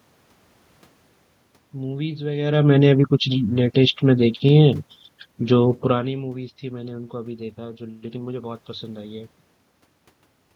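Nothing has gone wrong technically in this speech recording: the background noise is simply the room the microphone was in, and the level changes around 2.5 s and again near 6 s are just the talker moving relative to the microphone.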